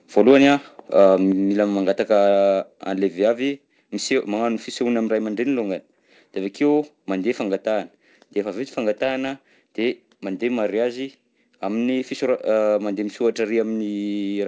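The microphone input was likely set too hot at the start of this speech recording, driving peaks about 2 dB past the converter's ceiling from 0.17 to 0.53 s. That is microphone overload. The tops of the loudest waveform peaks are flattened, and although only a small share of samples is affected, those squared-off crests add a harsh, crackling edge to the opening syllables. While that clipping is still happening, a microphone volume step-down follows, with the input gain lowered abruptly at 0.31 s by about 2 dB and again at 1.32 s by about 4 dB. This is likely the call software's automatic gain control reacting to the distorted peaks. Each step is heard as a sudden drop in level of both the voice and the background, and the second drop is the larger. The audio travels over a call path with nothing above 8 kHz, which fits a G.722 wideband codec, so the top of the spectrum is cut off.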